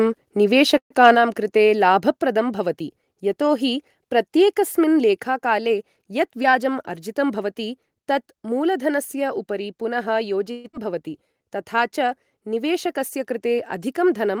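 From 0.77 to 0.92 s there is a call audio freeze. The last sound trails off and then goes silent for about 90 ms. Packets were likely held up, emptying the jitter buffer. Audio resumes where it stopped, 130 ms late.

From 1.04 to 1.10 s comes microphone overload. The peaks run about 1 dB past the converter's limit. A small share of samples get their tops sliced off, giving a harsh crackle.

At 1.15 s the microphone volume steps down by about 4 dB, likely the call software reacting to that clipping. At 5.23 s it drops again by about 3 dB. Each drop is sudden.

From 6.43 to 7.71 s, a jitter buffer speed-up plays the sound at 110% speed. Short pitch-period pieces, about 150 ms in total, are cut to shed excess delay. Pitch holds, but delivery sounds hurried.

A second freeze runs from 10.51 to 10.66 s. It fills 129 ms with a fading continuation and never reaches silence.

At 10.72 to 10.75 s, playback skips ahead. 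About 70 ms of audio is dropped, and the two sides are joined almost directly.

From 11.28 to 11.77 s, a jitter buffer slow-down repeats pitch periods, adding 70 ms. The sound plays at 87% speed, stretched but at unchanged pitch.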